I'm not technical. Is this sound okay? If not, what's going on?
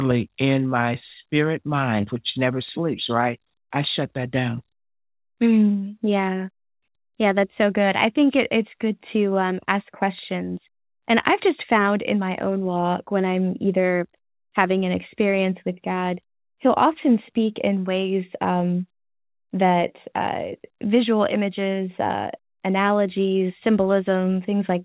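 Yes, nothing stood out as wrong when listening to this speech recording, which carries the narrower sound of an ordinary telephone line.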